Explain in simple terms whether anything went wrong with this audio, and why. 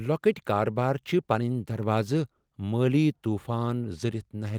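Nothing went wrong with this speech recording. Listening through it, no technical problem stands out at any point.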